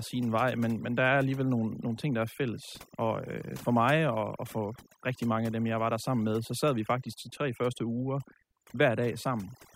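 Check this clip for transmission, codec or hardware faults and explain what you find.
One fault runs through the whole clip, and it comes from processing rather than the line or the hardware: overdone noise removal. Throughout the speech, the background collapses into near silence dotted with twinkling specks. A noise reduction stage was pushed too hard on a noisy recording. Any frequency band sitting close to its noise estimate gets driven down or shut off entirely, so quieter parts of the voice are stripped out with the noise. Bands flicking on and off leave those isolated chirps behind.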